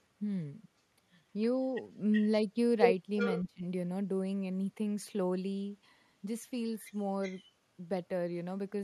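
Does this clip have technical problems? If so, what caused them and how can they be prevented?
Yes. Echo leak appears three times in this speech: 2.12 to 2.27 s, 3.17 to 3.42 s and 7.23 to 7.41 s. Each time a delayed copy of the speech returns 372 ms behind the original. It is quietest at 7.23 s, around 25 dB down, and loudest at 3.17 s, around 10 dB down. The likely cause is a loudspeaker on the far end whose echo canceller let part of the returned signal through. Prevention: use a headset, or give the echo canceller a better-converged filter and stronger residual suppression.

Speech suppressed in double talk follows directly at 3.44 to 3.63 s. For roughly 200 ms the talker's level drops by up to about 20 dB and sounds dipped. This comes right after the stronger echo burst ends, while both sides are active. The likely cause is the echo canceller failing to separate the near talker from loudspeaker echo and attenuating both. 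Prevention: use an echo canceller with reliable double-talk detection so near-end speech is not gated during overlap.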